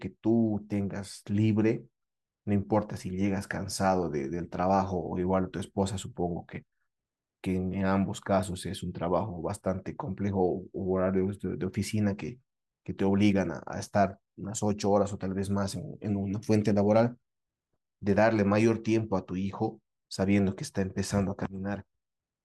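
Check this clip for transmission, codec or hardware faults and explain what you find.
No transmission, codec or hardware problems can be heard anywhere in this speech recording; the signal stays continuous and stable throughout.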